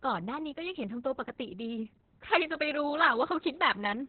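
From the start of the speech to its end, the sound carries heavy Opus voice compression. Nothing survives above about 4.4 kHz, so the voice is muffled, hoarse and faintly robotic. The coarse excitation coding in the SILK narrowband mode roughens it, which points to a rate near 6 kbps with long 60 ms frames. A plain low-pass filter would dull the voice without this grainy, synthetic texture, and that texture is what marks it as codec damage.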